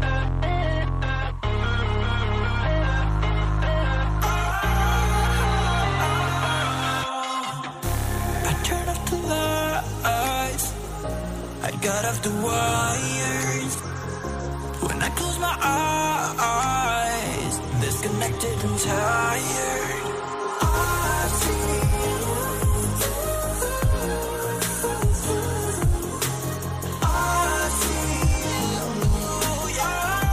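Nothing stood out as a technical fault on listening to this audio.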